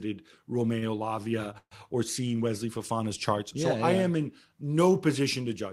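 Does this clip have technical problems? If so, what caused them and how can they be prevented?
Yes. From 0.79 to 0.85 s there is a short stall from a late packet. A packet arrived late, the jitter buffer ran empty, and the receiver held the last sound for about 27 ms before resuming where it left off. Nothing is lost, but playback falls 27 ms further behind. A slightly deeper or adaptive jitter buffer would absorb this.

From 1.58 to 1.74 s there is a call audio freeze. The speech is extended for 133 ms and fades, with about 70 ms of that silent, then continues from the same point with nothing missing and 133 ms of added delay. The likely cause is packets held up in the network, which drained the jitter buffer. Reducing congestion and prioritising voice traffic would prevent it.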